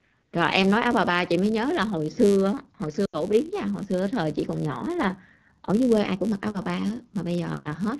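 Speech, coded with the AMR wideband (HD Voice) codec throughout and plainly damaged by it: the voice sounds rough and raspy, as the pulse-driven vocal tract model is starved of bits. That roughness fits one of the lowest AMR-WB rates, around 8.85 kbit/s, where detail up to 6.4 kHz gives way. Also throughout, a filter restarted on every block leaves a steady 100 Hz buzz. The filter drops its state at each block boundary and begins again from silence, so each block opens with a small transient, and these ticks repeat 100 times a second, louder where the speech is louder. From 3.05 to 3.22 s, lost AMR speech frames cut into the voice. About 80 ms of frames failed their checks, so the decoder kept reusing the last good pitch and vocal tract settings at falling gain. The sound drops to near silence within two frames, then returns briefly weak or rough.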